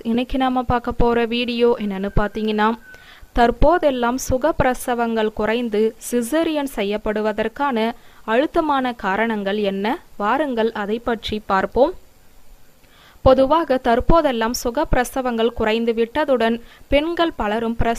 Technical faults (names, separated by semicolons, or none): none